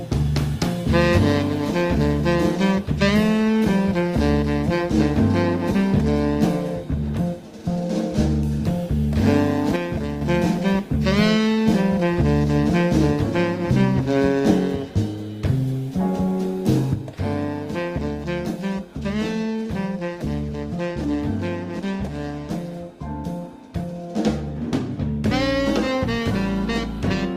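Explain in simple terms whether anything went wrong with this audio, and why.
One channel drops out, twice: briefly from 9.76 to 10.21 s, then again from 16.94 s to the end of the clip. Both times the sound suddenly gets noticeably quieter. The likely cause is that one of the two stereo channels went silent. When left and right are combined, shared sound loses half its strength.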